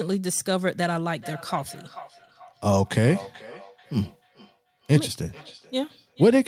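A speech clip with feedback echo between two devices from 1.21 s to the end at 6.48 s: a second device in the same room plays the call back, its output reaches the first microphone, and that device's echo canceller removes only its own playback. The speech returns about every 0.4 s, peaking at about 21 dB below the direct speech. The fixed, lengthy repeat interval distinguishes it from room reverberation, which is a continuous smear.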